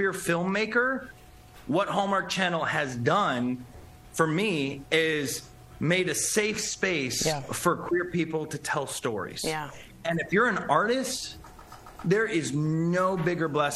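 At 8.11 s the sound goes through a digital radio blending to analogue: the receiver loses its digital stream and cross-fades over about 350 ms to the FM broadcast of the same station. You hear it drop about 4 dB in level, with FM hiss sitting somewhere around 40 dB below the programme. At 10.29 s it blends back to digital, and the hiss clears out again.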